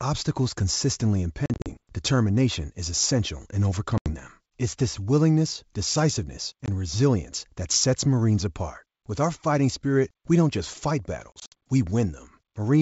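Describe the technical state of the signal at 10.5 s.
At 10.5 s the speech is intact, carried by G.722 wideband coding at 64 kbit/s with no fault audible at that point.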